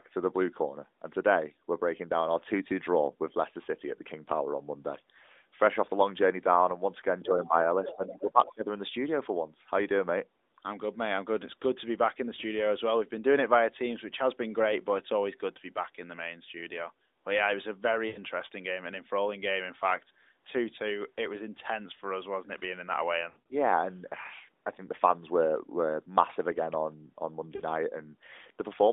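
It's a speech recording over a narrowband mobile line, band-limited to roughly 250 Hz to 3.7 kHz, with light AMR codec colouring that fits the 12.2 kbps mode. The other side's voice leaking through turns up in three scraps: a faint one at 7.22 to 7.26 s, a stronger one at 7.84 to 7.95 s about 10 dB under the talker, and a quieter one at 8.14 to 8.53 s. That's likely an echo canceller leaving some loudspeaker sound in the mic. Around the same moments there's speech suppressed in double talk. The talker dips by up to about 10 dB across 7.22 to 7.54 s, then more heavily, up to about 15 dB, from 7.94 to 8.66 s, likely as the canceller ducks everything while both sides are talking. Later come lost AMR speech frames. An 80 ms gap at 18.08 to 18.19 s smears and fades. From 23.30 to 23.55 s about 140 ms goes missing in scattered bits, the longest run 60 ms, so the sound warbles and thins. A brief 40 ms dropout at 27.56 to 27.63 s gives a quick dip.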